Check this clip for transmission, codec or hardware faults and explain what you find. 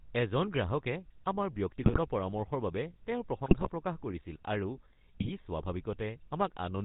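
Two faults are present: GSM full-rate codec coding throughout, and three bursts of GSM bit errors.

GSM full-rate codec, across the whole clip: the speech is rebuilt from a vocal-tract filter driven by sparse, regularly spaced pulses, and nothing above 4 kHz survives. At a rate that fits 13 kbps, the voice comes out plainly buzzy and gravelly.

GSM bit errors, at 1.82 to 1.99 s, 3.46 to 3.71 s and 5.20 to 5.31 s: corrupted bits reach the decoder and scramble the filter, pitch and gain values for a run of frames. The spectrum bends and the level jumps, so the speech breaks into brief squawks, pops and gargling.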